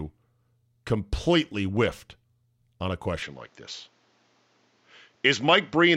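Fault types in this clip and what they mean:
Input switched to a poorer device: from 3.22 s the speech likely moves to another microphone, losing everything above 7.6 kHz; the spectrogram shows a sharp ceiling, with a faint new noise floor about 40 dB down.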